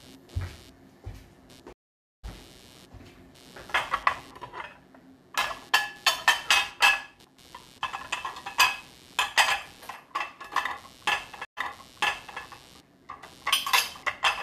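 A recording of everyday sounds with a computer activity noise running through the whole thing: a buzzy, chirpy pulsing at around 150 Hz, sitting roughly 25 dB under the sound. That's the machine's processor or graphics load shaking the shared ground the audio circuit sits on, so it follows the computer's activity rather than anything in the recording. On top of that there are two stream reconnects. From 1.73 to 2.25 s the audio drops out for about 0.51 s, then picks up roughly 0.7 s further on, so a bit of the sound is simply skipped. At 11.45 to 12.4 s the gap is shorter, about 0.12 s, but playback comes back 0.83 s earlier and replays a stretch, which fits a server resending a burst after the player reconnected and started a fresh decoder mid-stream.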